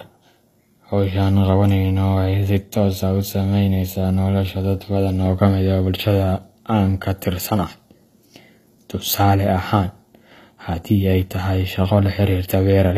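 HE-AAC compression, throughout: treble rebuilt from copied lower bands turns s sounds gritty and metallic, nothing above 14.9 kHz, likely from a low bitrate around 24 kbps.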